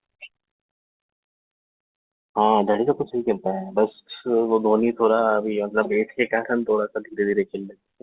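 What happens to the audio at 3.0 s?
Nothing goes wrong at 3.0 s: the speech continues intact, carrying only the ordinary band limit of the G.711 call path, with nothing above 4 kHz.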